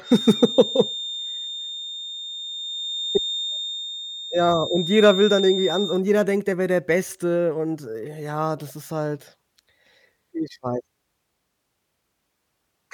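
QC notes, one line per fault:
0.00–6.04 s, feedback whistle: the loudspeaker-to-microphone loop is likely sitting right at its feedback point, sustaining one tone at 3.6 kHz without running away. It sounds as a thin, steady whistle about 10 dB under the speech, swelling and fading slowly, ending just before "jeder denkt er wär".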